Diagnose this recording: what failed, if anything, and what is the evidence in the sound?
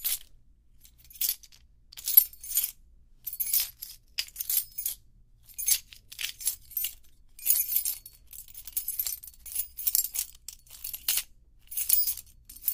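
Compressed frames skipped in the codec: at 3.69 s and 4.87 s the sound jumps about 50 ms ahead.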